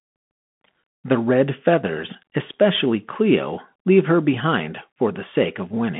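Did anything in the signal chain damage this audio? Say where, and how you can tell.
Yes, at the codec stage: the speech has passed through a Bluetooth CVSD headset codec for its whole length. Nothing reaches above 3.8 kHz, and the usable band sits at about 150 Hz to 3.6 kHz. Clearly audible granular hiss and scratchy s sounds also point to one-bit delta coding, which fits a 64 kbps CVSD stream whose adaptive step lags fast, loud high content. A plain narrowband filter or telephone codec would narrow the band without that grain.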